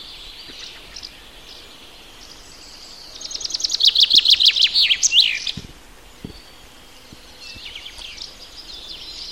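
Nothing is technically wrong with it.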